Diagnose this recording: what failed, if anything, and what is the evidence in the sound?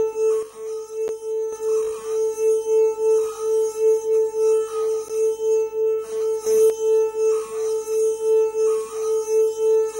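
There's a steady buzz at 50 Hz with hash above it and a faint whine at 15.6 kHz, sitting about 35 dB under the signal the whole way through. That's video or display buzz: a screen or video cable leaking its field rate and line rate into the analogue wiring.

At 0.43 s the sound and its background noise both drop by 6 dB at once, then snap back at 1.53 s. At 6.47 s everything jumps up 6 dB and returns at 6.70 s. It's a sudden gain jump, likely a digital gain setting applied without a ramp somewhere in the driver or processing chain.

Two short, hard-edged silent holes appear, at 1.08 s and 5.08 s, about 10 to 12 ms each and four seconds apart. That's a gap between stream segments: the time stamps of consecutive segments don't quite meet, and playback pads the gap with silence. Nothing is lost; the audio just resumes slightly later.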